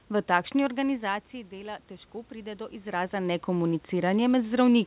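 A speech recording over a narrowband call line, with nothing above 4 kHz, that has automatic gain rising from 0.6 to 3.41 s. The talker backs off around 0.5 s, the level falls by about 13 dB, and the gain control slowly pushes back up about 6 dB, so the voice and the room noise swell together.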